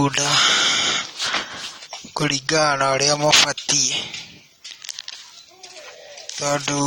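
Speech, marred throughout by plainly audible AAC compression damage. Nothing sounds above 18.6 kHz. Smearing and warbling likely come from lossy coding at a low bitrate, fitting about 32 kbps.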